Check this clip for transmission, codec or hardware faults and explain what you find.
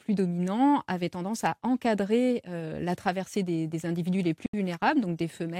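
One fault: a Bluetooth dropout from 4.46 to 4.54 s, right after "traversée des individus les". The speech cuts to silence for about 73 ms, then resumes further along as if it had kept playing. That's likely a handful of wireless packets arriving too late and getting discarded.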